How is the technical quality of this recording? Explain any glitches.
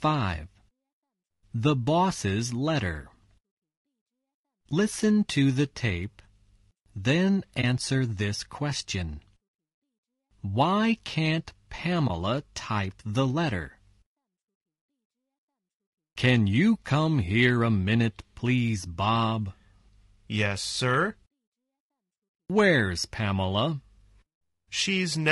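Technical quality is held back by audible coding damage that runs through the whole recording, and there are two brief dropouts.

Throughout, the speech sounds rough and grainy, with a hiss-like fill between the harmonics and a top end that sounds thin and a bit synthetic. That's likely low-delay AAC compression, the AAC-ELD flavour used in video calls. Its short frames can't separate pitch harmonics cleanly, so at a squeezed rate, which fits something around 32 kbps, the encoder smears noise into the gaps and fakes the highs.

At 7.61 to 7.64 s and again at 12.07 to 12.10 s there's AAC frame loss with muting. In each case one frame went missing, which fits a frame of about 20 ms. The decoder zeroed its spectrum, and the overlapping windows faded the sound down and back up. You hear a short, soft-edged dip.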